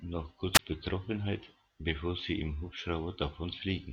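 At 0.54 s a wireless microphone squelch dropout interrupts the speech until 0.59 s. The radio link fades, hiss rises briefly, then the receiver's squelch mutes the output for about 20 ms. On a spectrogram, broadband noise precedes a near-empty vertical gap, and the waveform shows a flat hole.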